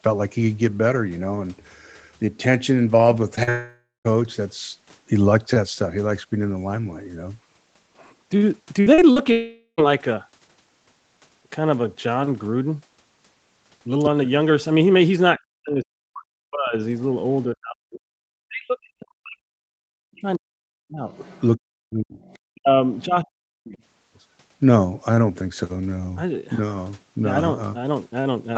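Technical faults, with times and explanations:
3.35 to 9.18 s, short concealed packet loss: brief smears or wobbles at 3.35, 3.43, 8.94 and 9.12 s, where about 20 ms of speech goes missing at the first and about 40 ms at each of the others. The audio did not reach the decoder in time, so the receiver carried the last sound forward, keeping its pitch if voiced or as shaped noise if not, then blended back into the real speech. Short consonants can drop out inside these gaps.
3.49 to 4.07 s and 9.32 to 9.80 s, long network dropout: the speech turns into a continued buzz or hiss that fades out, leaving about 180 ms of silence in the first gap and about 70 ms in the second. The speech then resumes further on, and roughly 560 ms and 460 ms of it are gone. This is likely a network dropout. No audio arrived, and the receiver stretched the last sound until it had nothing left to extend.
8.81 to 8.88 s, burst of packet loss: a held, fading tail of the previous sound fills a gap of about 54 ms, and the speech then jumps ahead with about 60 ms missing. 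Several packets were lost or came too late to be played. The concealment continued the last sound and turned it down as the gap went on, so a voiced sound becomes a held buzz and other sounds a fading hiss.
15.38 to 16.75 s, 17.53 to 21.06 s and 21.56 to 23.78 s, speech suppressed in double talk: the talker's speech dips by up to about 40 dB, with about 1.5 s, 3 s and 1.5 s affected in the three stretches. The likely cause is an echo canceller that heard the far side on the loudspeaker during this talker's speech. It could not tell the talker apart from the echo and turned both down.
16.94, 21.11 to 21.42, 22.23 to 22.37 and 22.94 to 23.05 s, other side's voice leaking through: scraps of a second voice come through about 30 to 40 dB below the speech. This is likely loudspeaker echo that the echo canceller did not fully remove from the microphone. The last two leaks fall inside the third suppressed stretch. 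The band tops out at 8 kHz, which fits Opus at 20 kbps on the call path.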